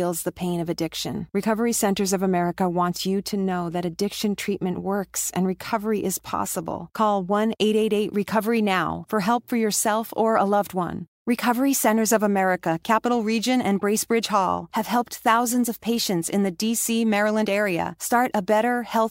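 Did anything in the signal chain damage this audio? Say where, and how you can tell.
No, nothing in the chain has damaged this recording.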